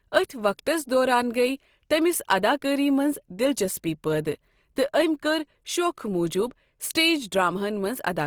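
Throughout, the speech sounds grainy and rough, likely from Opus compression near 24 kbps. On a spectrogram, bands look noise-filled and speckled, extending to 20.3 kHz.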